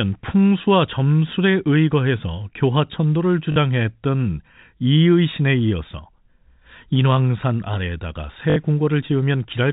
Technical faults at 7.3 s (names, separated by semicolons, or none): none